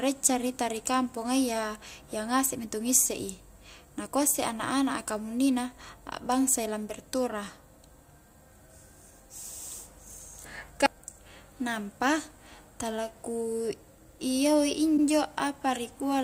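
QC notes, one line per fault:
14.97–15.04 s, repeated frames. A 72 ms stretch of speech plays a second time straight after itself, heard as a short stutter. The length fits about three compressed frames, and the clip runs 72 ms longer.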